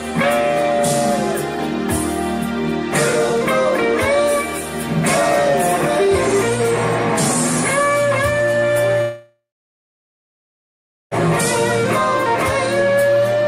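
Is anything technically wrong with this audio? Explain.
Yes. From 9.01 to 11.14 s there is a long network dropout. The audio gives way to a buzzy, hissing continuation of the last sound that fades within a few tenths of a second and leaves about 1.7 s of silence. The sound then resumes with roughly 2.1 s of material gone. This likely happened because packets stopped arriving and the receiver's concealment filled the gap. On a waveform it shows as a decaying tail into a flat line. A spectrogram shows smeared, fading bands and then a blank region before the sound resumes.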